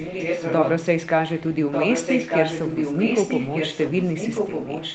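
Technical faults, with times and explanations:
0.00–0.83 s, 1.02–1.10 s and 1.37–4.95 s: echo leak. A copy of the speech returns about 1.2 s late, likely from an echo canceller failing. It is roughly as loud as the speech at first, faint at 1.02–1.10 s, then slightly quieter. Waveform and spectrogram show a repeat of the speech patterns shifted by that delay.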